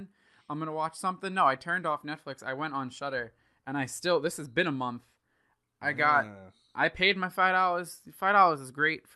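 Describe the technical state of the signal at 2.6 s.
At 2.6 s the speech is intact, with nothing wrong at that moment beyond the ordinary character of the call path it passed through.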